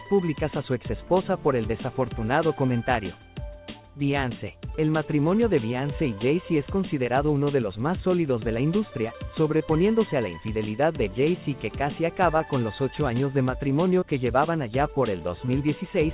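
Short concealed packet loss occurs five times: 2.66–2.69 s, 9.57–9.62 s, 12.38–12.42 s, 14.00–14.04 s and 15.46–15.50 s. Each time about 20 ms of audio, which fits one lost packet on this G.711 mu-law call, never reached the decoder. The receiver stretched the preceding sound across the gap and blended back, leaving a brief smear or wobble in audio that stops at 4 kHz.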